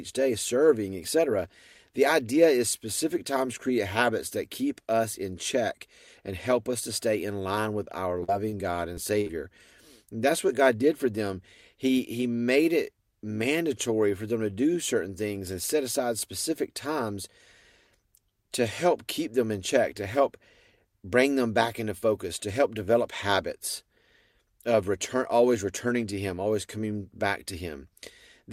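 Right after "stay in line with", from 7.84 to 9.30 s, the speech breaks into repeated packet loss with a robotic sound. Eight short holes, none longer than 50 ms, are patched by stretching the preceding sound, so about 13% of the stretch is concealment. That produces choppy sound with pieces missing. Unlike a single dropout or steady codec smearing, the damage recurs in quick succession.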